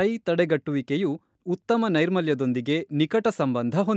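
No technical faults detected.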